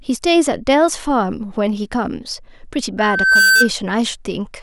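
Loudspeaker feedback squeal runs from 2.98 to 3.70 s in this speech clip. A microphone is picking up the loudspeaker it drives, and around 1.5 kHz the gain around that loop tops one, so the tone feeds itself. It swells over roughly 0.4 s into a steady, piercing whistle that ends up a few decibels louder than the speech.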